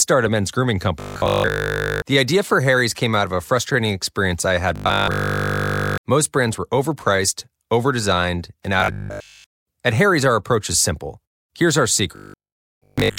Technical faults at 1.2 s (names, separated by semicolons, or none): robotic sound from repeated short buffers